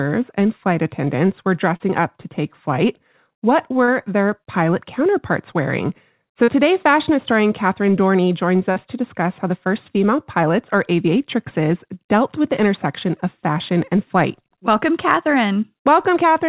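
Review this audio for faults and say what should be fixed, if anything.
Short concealed packet loss: roughly 40 ms of audio failed to reach the decoder in time at 1.76 s (after "and flight attendants were"), 3.84 s, 6.44 s (before "fashion historian") and 8.72 s (before "to discuss how the"). Each time, the receiver filled the gap by stretching the preceding sound, leaving a brief smear or wobble. A deeper jitter buffer, forward error correction or a more stable network link would prevent these gaps.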